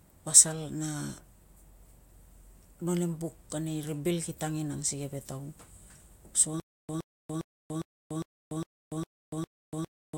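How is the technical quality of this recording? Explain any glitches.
The recording breaks down near the end with one fault. From 6.6 s to the end, a stutter with silent gaps: the same 117 ms burst repeats eight times, every 406 ms, with 289 ms of silence between, likely a stalled stream replaying its last fragment while the rest is lost.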